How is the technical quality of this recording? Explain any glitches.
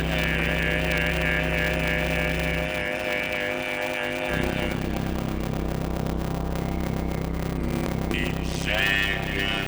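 The recording has a serious fault that runs throughout. A block size mismatch (padded) causes a constant buzz and slowed playback. Each short block is filled out with silence, which fits 256-sample writes padded to 480. These gaps repeat at 100 Hz and produce the buzz. The audio plays at 0.533 times its normal speed, at about its normal pitch.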